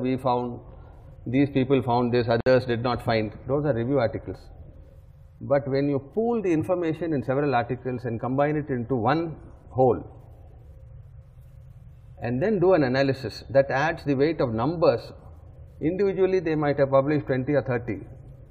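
At 2.41 s the sound drops out until 2.46 s. This is a gap at a join of encoded pieces. Separately encoded segments were spliced untrimmed, leaving encoder delay and end padding. The 58 ms gap has smeared edges, so its silent part is shorter. Then the sound resumes where it stopped.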